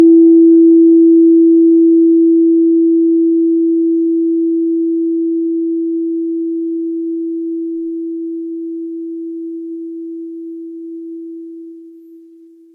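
Nothing goes wrong anywhere in this bit of music; there's simply no fault to point to.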